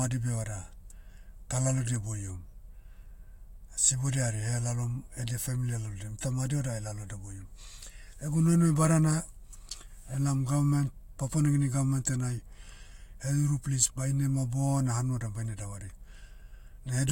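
Listening to the speech, nothing stood out as a technical fault at any point.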